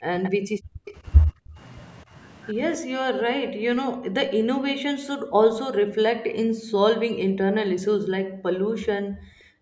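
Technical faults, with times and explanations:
0.0–0.13 s and 5.04–5.11 s, speech suppressed in double talk: the voice drops by up to roughly 40 dB in brief holes. This is likely an echo canceller ducking during overlapping talk, seen as a near-empty gap in the waveform envelope.
0.23–0.3 s and 0.86–0.93 s, echo leak: faint scraps of the voice return about 255 ms late, some 30–35 dB down. This is likely uncancelled loudspeaker pickup, showing on a spectrogram as weak, delayed, smeared copies of earlier harmonics.
0.41–0.86 s, 1.27–1.57 s, 2.78–4.76 s and 5.39 s to the end, background gated by the echo canceller: the room noise drops sharply while the loudspeaker plays, by about 40 dB (about 28 dB at 1.27 s). On a spectrogram the noise floor goes dark abruptly.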